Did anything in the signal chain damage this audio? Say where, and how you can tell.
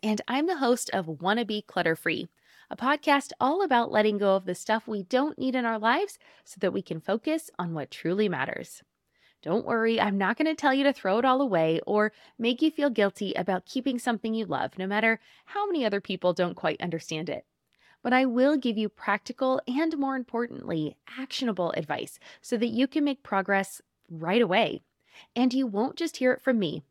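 Yes. From 3.14 s to the end, the speech turns dull and muffled. The top end falls away in a smooth, gradual slope, about 8 dB down at 10 kHz relative to 1 kHz. That is de-emphasis applied wrongly: a treble-cut filter meant to undo pre-emphasis ran on audio that had none, or ran a second time, at a processing or playback stage. A low-pass filter would instead leave the treble intact up to a cutoff and then drop it steeply.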